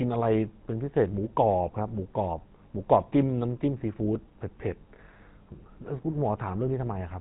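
From start to finish, the speech carries the sound of the GSM full-rate codec. Nothing comes through above about 3.9 kHz, so the top end sounds dull and boxed in. The codec rebuilds the voice from a vocal-tract model fed by a coarse pulse train. Much of the fine excitation detail is discarded. That leaves a plainly audible buzzy, gravelly roughness. The damage fits a 13 kbps stream.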